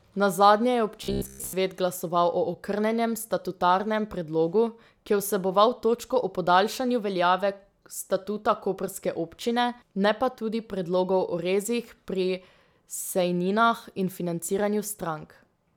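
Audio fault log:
1.04–1.53 s, robotic sound from repeated short buffers: the speech turns into a rigid, metallic buzz pitched at 66.8 Hz that only loosely tracks the words. This likely comes from a short buffer of about 15 ms being replayed over and over, with most of the real audio skipped.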